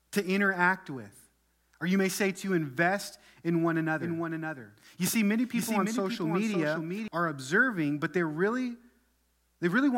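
From 4.00 to 7.08 s, between "to invest in one" and "are observing but they", a doubled audio track appears: a dry, full-band copy trails about half a second behind, roughly 5 dB lower, likely from a slower second capture or misaligned edit. Spectrograms show each pattern repeated, shifted right, switching abruptly.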